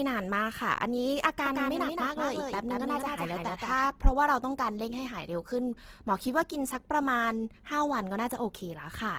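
From start to finish the speech carries plainly audible damage from Opus compression, most likely its music-style mode at a low bitrate that fits about 16 kbps. With too few bits, the encoder keeps each band's energy but refills much of the detail with noise or copied lower bands. The audio still reaches about 20.2 kHz, yet the tonal parts of the speech sound grainy and rough, with a hiss-like texture in place of clean detail.

From 1.46 to 3.86 s a doubled audio track appears, likely from the same signal reaching the mix twice through a second, slower path. A full-band copy trails the original by roughly a fifth of a second, around 5 dB quieter, with no reverberant tail or room colouring. It gives the speech a hard, slap-like echo that starts and stops abruptly at those two points.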